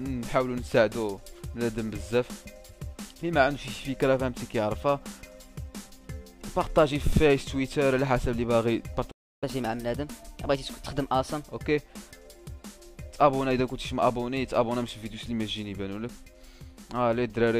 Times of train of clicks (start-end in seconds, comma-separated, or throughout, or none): none